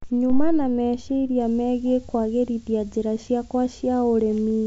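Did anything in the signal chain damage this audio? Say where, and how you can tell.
Yes: a switching supply whistle from 1.4 s to the end, wandering between 8.5 and 11 kHz, well below the speech. It sits above the G.722 band, so it points to a power supply leaking into analogue wiring after decoding.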